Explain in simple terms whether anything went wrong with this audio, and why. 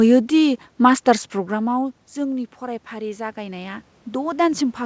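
After "दि मास्टार्स", from 1.48 to 4.51 s, voice and room noise slowly swell louder together: automatic gain rising, boosting a talker who had moved away.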